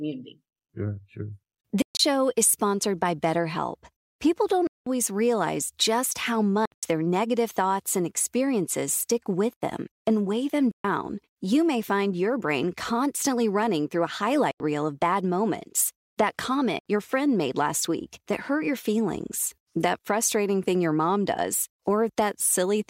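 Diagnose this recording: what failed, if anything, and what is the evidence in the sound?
Six silent holes, at 1.82, 4.67, 6.65, 10.71, 14.51 and 16.79 s, last 64 to 192 ms, with abrupt or briefly faded edges. The speech resumes further on, as if it had kept playing. A buffer underrun would pause in place instead. This is likely a Bluetooth dropout at the wireless playback stage.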